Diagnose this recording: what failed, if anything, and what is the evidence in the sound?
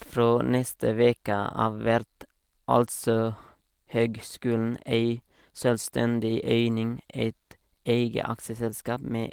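Nothing in the speech stood out on listening as pointing to a failure at any stage of the chain.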